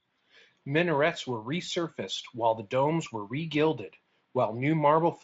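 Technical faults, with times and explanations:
No technical faults are audible anywhere in this recording.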